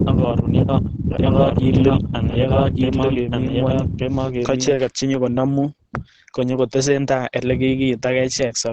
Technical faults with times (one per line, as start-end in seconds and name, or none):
0.00-8.73 Opus compression
1.18-4.72 doubled audio track